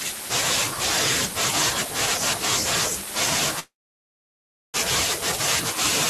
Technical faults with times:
3.59-4.76 call audio freeze

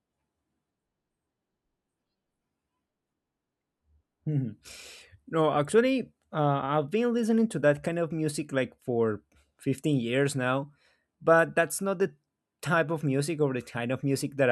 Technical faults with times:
none

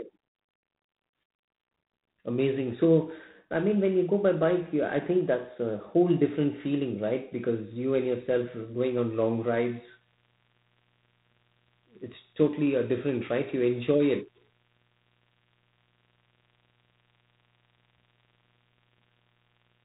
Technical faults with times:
0.00-19.84 G.726 ADPCM

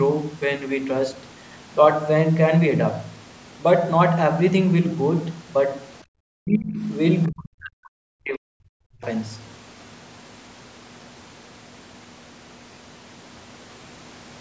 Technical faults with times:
6.04-6.14 background gated by the echo canceller
6.42-6.82 speech suppressed in double talk
7.27-9.04 speech suppressed in double talk

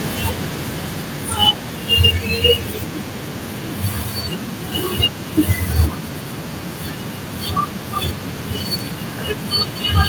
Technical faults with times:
0.05-1.75 automatic gain falling

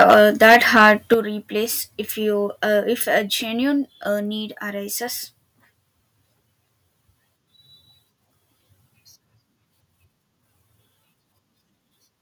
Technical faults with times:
0.00-1.14 microphone overload
0.14 microphone volume stepped down
1.14 microphone volume stepped down
3.18 microphone volume stepped down

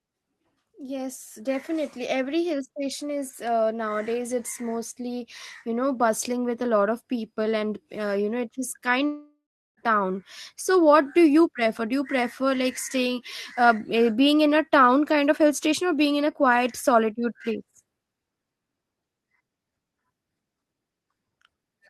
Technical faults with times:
9.05-9.79 long network dropout

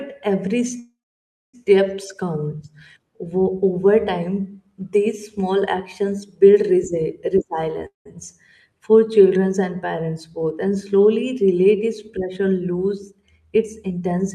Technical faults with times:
0.79-1.55 call audio freeze
7.87-8.07 call audio freeze
12.76-14.28 jitter buffer speed-up

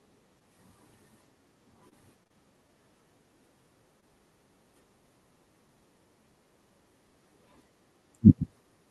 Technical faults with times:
1.89-1.94 short stall from a late packet
2.24-2.32 short concealed packet loss
4.00-4.14 short stall from a late packet

